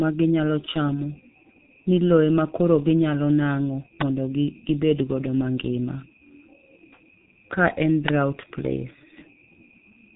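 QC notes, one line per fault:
Throughout: G.723.1 codec. Heavy coding damage leaves the speech muffled and hoarse, with smeared consonants. Nothing passes above 3.8 kHz, and the slow 30 ms frame-by-frame model update blurs fast transitions, consistent with a low-rate coder running at roughly 6 kbit/s.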